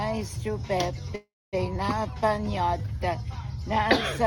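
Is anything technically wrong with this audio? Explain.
Yes. From 1.15 to 1.55 s the sound stalls: the last moment carries on as a fading buzz, then about 250 ms of silence, before resuming where it stopped. This call audio freeze likely came from delayed packets draining the jitter buffer, inserting about 373 ms while losing nothing.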